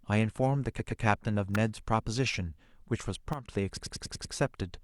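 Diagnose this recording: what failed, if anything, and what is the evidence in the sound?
Stuttering at 0.78 to 1.02 s, where a 120 ms block replays twice (adding 240 ms), and at 3.76 to 4.33 s, where a 96 ms block replays six more times (adding 576 ms): repeated frames from codec or storage.

A sharp, brief snap at 1.55 s sits on top of the speech, likely an electrical switching spike picked up by the analogue wiring.

Speech and background noise drop together by about 10 dB from 3.33 to 3.48 s, a sudden gain jump likely caused by a digital gain change applied without a ramp.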